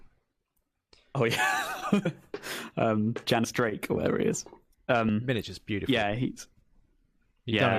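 At 2.05, 3.43, 5.08 and 7.25 seconds the speech jumps forward as compressed frames are skipped. Whole blocks of encoded audio never reach the output: about 70 ms (roughly three frames) at the first point, and about 40 ms (around two frames) at each later one, which fits a frame length near 21.3 ms. Unlike a dropout, there is no silent gap. Unlike a sample-level splice, there is no sharp click. The overlapping frames blend the join into a brief smeared blip.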